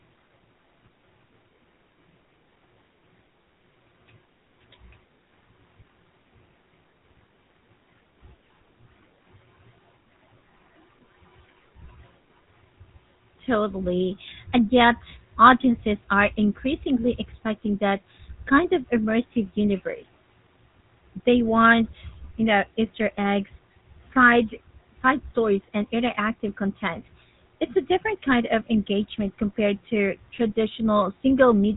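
Speech carrying GSM full-rate codec damage that is plainly audible from start to finish. The voice has a gravelly, buzzy roughness because the codec rebuilds each sound from a vocal-tract model excited by sparse, regularly spaced pulses, which fits the 13 kbps GSM full-rate scheme. Nothing survives above 3.8 kHz. That buzz separates it from a plain telephone band-limit, which dulls the sound without roughening it, and from MP3-style swirling artefacts.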